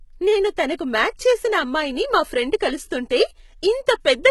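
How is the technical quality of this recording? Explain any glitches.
The recording is heavily compressed from start to finish. HE-AAC compression, throughout: the treble is likely regenerated from copied lower bands rather than coded, and the sound points to a very low bitrate, around 16 kbps. The speech's s sounds come out gritty and metallic, with nothing above 11.8 kHz.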